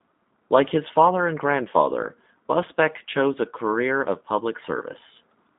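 Speech runs through the G.729 codec for its whole length, and the damage is plainly audible. The sound is confined to a telephone-style band of about 200 Hz to 3.7 kHz, with nothing above 3.8 kHz. A plain narrowband filter would leave speech clean but dull. Here the voice also sounds rough and synthetic, because each 10 ms frame is rebuilt from a vocal tract filter, a pitch predictor and a few pulses. That behaviour fits an 8 kbit/s G.729A stream.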